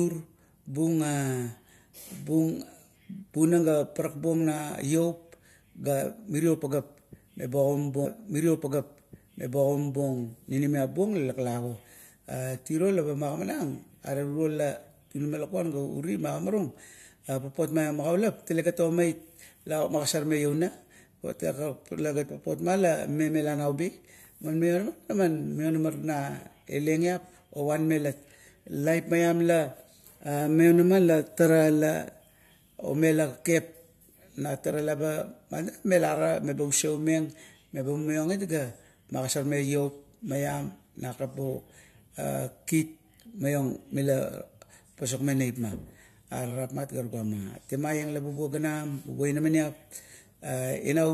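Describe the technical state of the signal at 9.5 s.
At 9.5 s the signal is inside a stream segment repeated fault running from 8.04 to 10.05 s. Just after "mirio pageap eba" the player queues the same segment twice, so about 2.0 s of speech replays, with a small blip marking the jump back.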